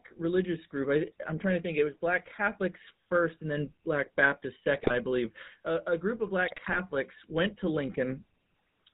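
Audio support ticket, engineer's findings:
GSM full-rate codec, whole clip: regular-pulse vocoder coding, consistent with 13 kbps full rate. Nothing passes above 4 kHz, and the speech is plainly buzzy and gravelly throughout.

GSM bit errors at 4.74–4.94 s (before "believe a a group") and 6.48–6.8 s ("a a group of" → "went to"): corrupted filter, pitch and gain values cause frame-level squawks, pops and gargling.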